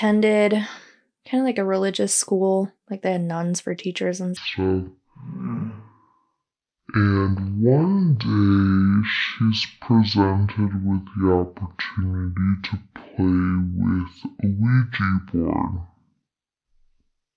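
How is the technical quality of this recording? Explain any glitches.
The recording has one serious fault: from 4.37 s to the end, after "nuns for teachers and", it plays with the wrong sample rate. The speech drops a full octave (12 semitones) and runs at half speed. That fits audio recorded at 44.1 kHz being played back at about 22 kHz without conversion. Pitch and tempo change together by the same ratio, which distinguishes this from a pitch shift or a time-stretch, where only one of the two changes.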